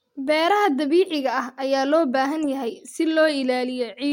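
Nothing technical goes wrong in this short bit of speech; there's nothing here to flag.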